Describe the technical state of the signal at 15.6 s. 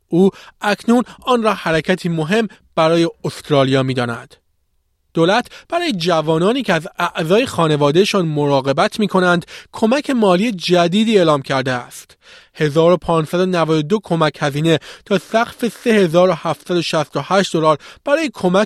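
At 15.6 s the speech signal is intact, with no audible technical fault at that point.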